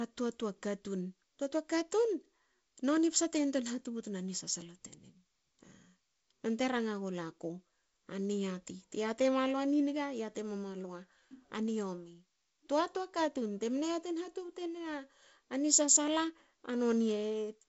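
Speech carried over G.722 wideband telephone coding, with its content ending around 7.7 kHz and the light lower-band graininess that fits the codec's 48 kbit/s mode, and no technical fault present.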